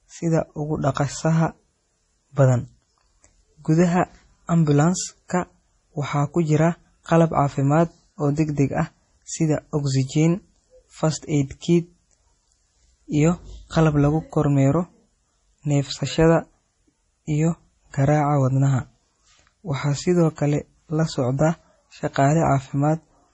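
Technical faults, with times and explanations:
Throughout, MP3 compression: the speech sounds watery and swirly, with metallic chirps on s sounds, smeared onsets and nothing above 10.5 kHz. The cause is likely an MP3 encoder short of bits, cutting the treble and switching weak frequency lines on and off between frames. The heavy damage fits a bitrate around 32 kbps.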